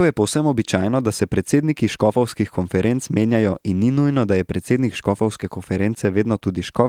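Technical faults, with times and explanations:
No technical faults can be heard: the speech keeps its full bandwidth up to about 20 kHz, consistent with Opus voice compression running in its hybrid mode at a moderate rate, with only light coding damage.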